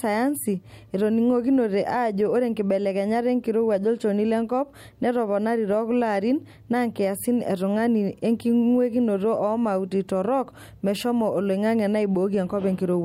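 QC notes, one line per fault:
Nothing here needs flagging, so there's nothing for the QC list on this speech clip.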